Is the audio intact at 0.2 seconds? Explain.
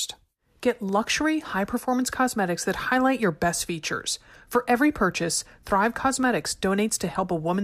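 Yes, at 0.2 seconds the speech plays through intact, with no dropout, click or distortion at that point.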